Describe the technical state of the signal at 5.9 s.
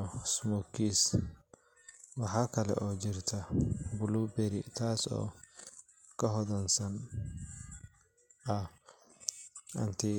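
At 5.9 s the speech signal is intact, with no audible fault at that moment.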